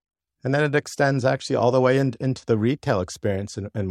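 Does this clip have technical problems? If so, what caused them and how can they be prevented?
No, nothing technical gets in the way here, so there's nothing to trace back or guard against this time.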